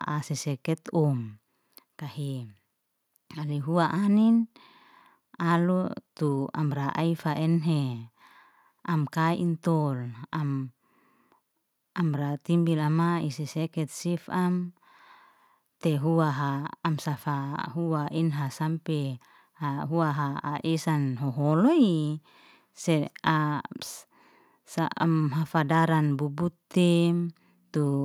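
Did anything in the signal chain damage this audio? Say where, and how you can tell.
No, nothing in the chain audibly damaged this speech.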